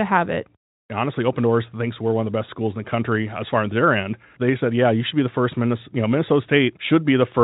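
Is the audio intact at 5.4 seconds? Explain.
Yes, at 5.4 seconds the speech is intact, with no fault to be heard at that moment.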